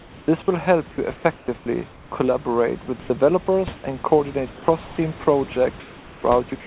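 Right from the start, up to 0.28 s, the room hiss is swapped for comfort noise in place of the background. It's a flat, featureless fill about 3 dB quieter than the real background, likely from the sender going silent between bursts of speech. Over 0.26 to 0.28 s there's an onset clipped by the voice detector: the first 20 ms of speech never arrived, so the speech starts abruptly. The same synthetic fill covers stretches between 1.16 and 2.12 s. At 2.86 to 2.88 s comes sound dropped by the voice detector, where about 10 ms of sound was likely taken for background and replaced, and comfort noise then runs to 3.1 s. Between 3.76 and 3.84 s the background goes smooth again, only about 1 dB down. From 4.52 s to the end it's sound chopped by the voice detector: the sending likely keeps switching on and off, so soft edges vanish. Throughout, the call path cuts everything above 4 kHz, which fits G.711, and the room noise sits about 23 dB under the speech.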